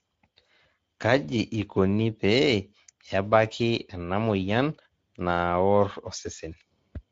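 Speech throughout sounds noisy and hoarse, with plainly audible Speex codec damage: too few excitation bits, pointing to a low-to-middle setting around 17 kbps.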